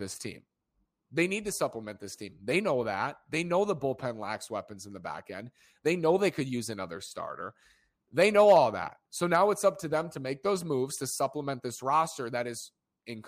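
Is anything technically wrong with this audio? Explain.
Yes. From 8.21 to 8.58 s the speech shows hard clipping. Peaks exceed what a stage can pass by about 2 dB and are sliced flat, adding high harmonics heard as brief crackle on loud moments. Unlike soft saturation's rounded warmth, these edges sound sharp and gritty.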